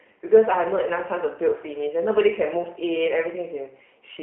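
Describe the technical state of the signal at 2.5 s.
At 2.5 s the speech sounds narrow, slightly rough and synthetic, confined to roughly 250 Hz to 3.4 kHz. This is G.729 codec damage, present throughout the clip. The speech is being rebuilt from a vocal tract filter, pitch predictor and sparse pulses, consistent with 8 kbit/s coding.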